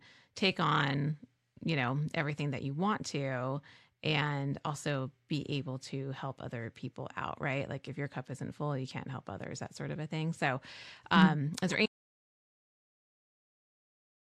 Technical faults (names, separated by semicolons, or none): corrupt frame decoded; audio dropout to silence